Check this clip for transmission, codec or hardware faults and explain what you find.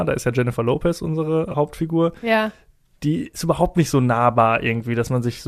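There's one fault worth flagging: a brief dropout around 1.52 to 1.55 s. The underlying codec, likely a low-delay AAC along the lines of AAC-ELD, only leaves a light roughness on the speech and isn't a fault.

The glitch is AAC frame loss with concealment. About 20 ms of audio went missing, which fits two low-delay frames of roughly 10 ms each. The decoder patched the hole by reusing the last good spectrum, so you hear a short smeared, noisy, phasey blip rather than silence. It's too short for any fade-out to kick in.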